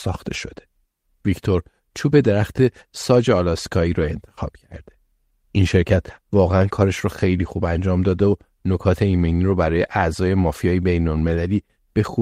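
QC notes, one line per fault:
0.37–0.39 s, 4.01–4.03 s, 6.47–6.49 s, 7.45 s, 9.67–9.69 s, 11.27 s: lost packet rebuilt from error correction. Each is a brief 20 ms patch of rougher, noisier speech with no gap. A single packet went missing each time, and the decoder played the low-bitrate copy carried in the following packet.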